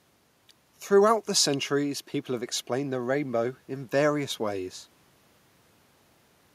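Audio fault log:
No technical faults can be heard in the speech recording; the signal stays continuous and steady in level, with nothing that points to a problem in capture, processing or playback.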